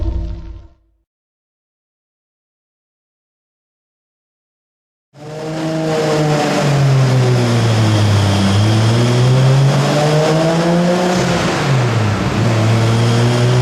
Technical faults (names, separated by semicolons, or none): none